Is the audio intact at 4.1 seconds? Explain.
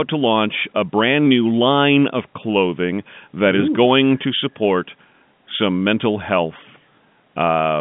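Yes, the speech at 4.1 s is intact, with only the narrow band of the G.711 telephone coding it passes through.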